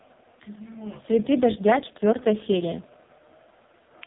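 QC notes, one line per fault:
Throughout: AMR narrowband mobile codec, heavy damage. The speech is squeezed into the mobile narrowband channel, so nothing above about 3.8 kHz survives, leaving it boxed-in and telephone-like. The codec rebuilds the voice from a vocal-tract model excited by a handful of pulses per 5 ms subframe. With so few bits, that excitation is coarse, giving a buzzy, synthetic, robotic quality that points to the lowest AMR-NB mode, around 4.75 kbps.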